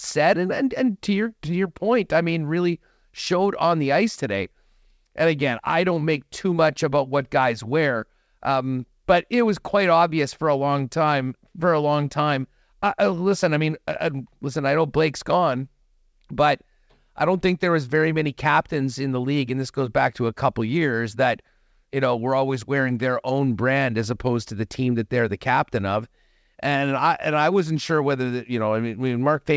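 No faults are audible in this speech; it passes through a call path whose content stops at 8 kHz, consistent with a G.722 wideband codec, and the jitter buffer introduces no gaps or warping.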